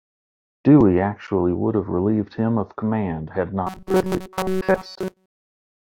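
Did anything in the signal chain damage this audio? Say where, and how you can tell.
Yes. After "him of command had", 3.67–5.91 s has robotic sound from repeated short buffers, likely a driver-buffer underrun. Most audio is replaced by 5.3 ms repeats. The waveform loops identically, and the spectrogram shows rigid 188 Hz harmonic stripes.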